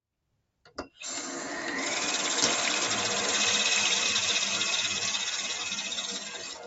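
Noise suppressor applied to music or sounds, throughout: a suppressor tuned for speech stays engaged across the whole clip and treats sustained, steady parts of the sound as noise to be removed. Its gain keeps shifting by roughly 10 dB, so the level pumps and flutters, and held tones and decaying tails thin out while sharp onsets pass through. Nothing reaches above 8 kHz, consistent with the call path's bandwidth.

Sound cut by the noise suppressor, from 0.22 to 1.01 s and from 4.93 s to the end: in these stretches the suppressor misreads the sound as noise and pulls it down much further than the rest. The first stretch dips by as much as about 20 dB, with roughly half a second affected in all. The closing stretch sinks by up to about 15 dB, so steady or fading material drops away and its decay is cut short.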